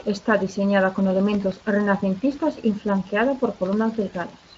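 Throughout, sample clock jitter of well under a microsecond adds a faint roughness that, unlike steady hiss, swells on loud, bright syllables and vanishes in pauses.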